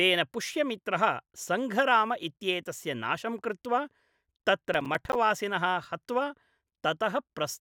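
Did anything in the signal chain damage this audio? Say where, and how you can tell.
Yes, at the driver or buffer stage. From 4.74 to 5.15 s there's processor overload crackle: a gritty tearing over the speech. The CPU kept missing deadlines for very short buffers, around ten of them, and each miss dropped in a hard-edged sliver of silence.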